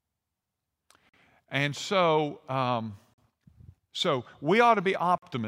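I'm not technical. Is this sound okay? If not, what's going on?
No. The speech is broken by a gap between chunks three times, at about 1.09, 3.14 and 5.18 seconds. Each gap is a short hole of silence, 44 milliseconds long. They come about 2.04 seconds apart. The audio was handled in two-second pieces, and a little silence got stuck in at each join. Nothing is missing. The sound just stops briefly and then carries on.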